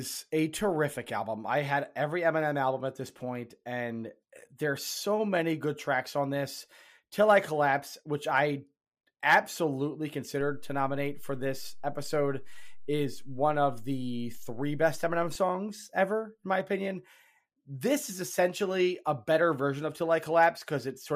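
A low thump at 10.41 s and another at 15.35 s mark a DC step: the waveform's zero line jumps by about -37 dBFS, holds at that offset, then returns, as when an offset input or converter recalibration shifts the baseline while the speech continues unaffected.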